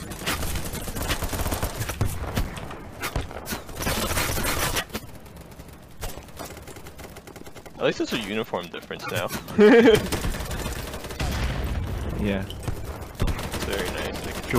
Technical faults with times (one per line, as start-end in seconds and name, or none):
2.44 block of digital silence